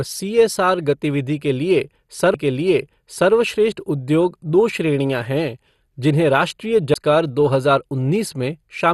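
The whole clip of speech sounds dull and granular, with nothing above 12.2 kHz, likely from MP2 compression at a rate near 64 kbps starving upper sub-bands. At 2.34 s and 6.94 s a CD skip mutes the playback, briefly and then for about 15 ms, heard as a tick before the speech resumes from another point.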